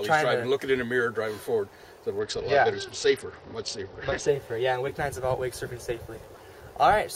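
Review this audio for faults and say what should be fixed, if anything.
From 2.19 to 4.27 s the treble goes dull and gritty noise rises: a Bluetooth SBC bit pool drop, consistent with the bit pool falling from 31 to 8, near 66 kbps, starving upper sub-bands. Reducing radio congestion or interference on the link keeps the encoder from cutting its bit pool.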